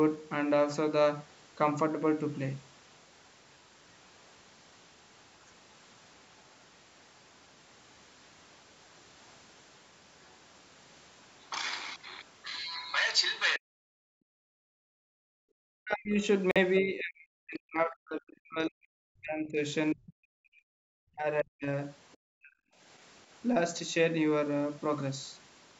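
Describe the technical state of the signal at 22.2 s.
Right around 22.2 s, the echo canceller is the likely culprit: with the far end playing through a loudspeaker, it failed to fully scrub that sound from the microphone, and the other side's voice leaking through appears from 22.12 to 22.17 s. It is a brief, faint scrap, roughly 40 dB below the speech.

Immediately afterwards, from 22.28 to 22.57 s, the canceller likely faced both sides talking at once, could not tell its own talker from the loudspeaker echo, and pulled the whole signal down. This is speech suppressed in double talk. For about 0.3 s the talker's voice sinks, at its deepest by around 40 dB, so it sounds ducked before it recovers.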